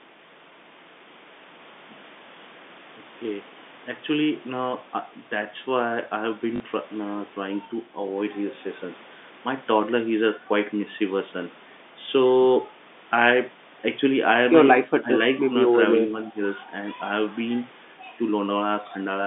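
A speech recording carried over a narrow telephone-band line, G.711 coding, has two audible faults. From 6.56 to 6.60 s there is a brief robotic stutter lasting 40 ms: packet loss with the last packet repeated, where the receiver replayed stale audio to fill a gap that fits two lost 20 ms packets. Between 14.83 and 15.12 s the speech dips, falling by about 15 dB for around a fifth of a second in total, likely speech suppressed in double talk, as the echo canceller turned the talker down while the other side spoke.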